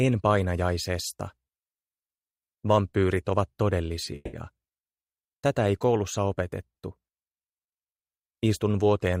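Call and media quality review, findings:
Call audio freeze, 4.15–4.36 s: last sound held as fading buzz, then resumes unclipped. Likely jitter buffer underrun. Spectrogram shows smeared horizontal streak; output runs about 180 ms late afterwards.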